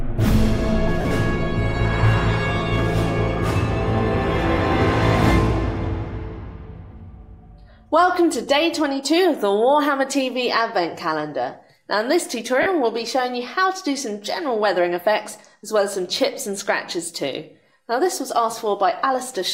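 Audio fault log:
1.01–1.11 s, lost LE Audio frames: about 80 ms of audio goes missing, scattered across 100 ms with the longest gap around 40 ms. The LC3 decoder fills each gap by repeating the last spectrum with randomised signs, so tonal content smears into brief noise.
12.62–12.66 s, lost LE Audio frames: 40 ms of audio goes missing, concealed the same way. The decoder reuses the previous spectrum with random phase signs, producing a short noisy smear in place of the original sound.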